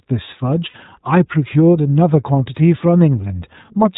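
Throughout the speech, the iLBC codec is at work. Nothing is heard above 4 kHz, and the voice has a plainly audible rough, slightly synthetic edge. The 20 ms framing points to iLBC's higher-rate mode, around 15.2 kbps. Each frame's excitation is coded on its own rather than predicted from the previous frame.

From 0.70 to 0.76 s come lost iLBC frames, about 40 ms of missing audio, which fits two dropped 20 ms frames. The decoder fills the gap by repeating the last pitch cycle blended with noise, so it sounds like a brief held, faintly buzzy vowel rather than silence or a click. Unlike concealment in codecs that depend on earlier frames, the voice sounds right again almost immediately after the gap.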